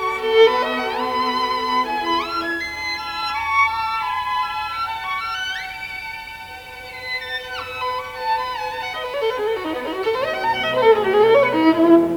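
From start to finish the sound carries a grainy, signal-following distortion whose level sits roughly 30 dB below the signal. This is likely low bit depth without dither, consistent with rounding to about 8 bits, so quiet passages turn gritty and the faintest detail drops to silence or sputters.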